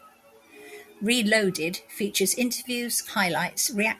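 No technical faults are audible.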